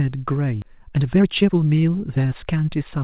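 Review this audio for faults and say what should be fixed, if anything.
A skip ahead occurs at 0.62 to 0.64 s. Roughly 0.7 s of speech is dropped. Playback jumps forward with no gap filled. A larger jitter buffer with better overflow handling prevents this.

Jitter buffer speed-up runs from 0.72 to 2.68 s. Pitch periods are cut repeatedly. Speech plays at 118% speed, removing around 0.4 s. Gentler, slower buffer-level correction would prevent this.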